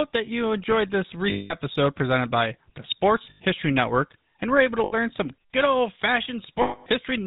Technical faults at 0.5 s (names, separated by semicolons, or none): GSM full-rate codec